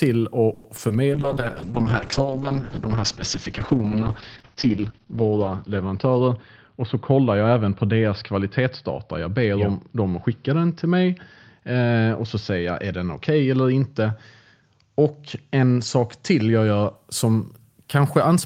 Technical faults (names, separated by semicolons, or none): call audio freeze; short concealed packet loss; call bitrate drop; jitter buffer speed-up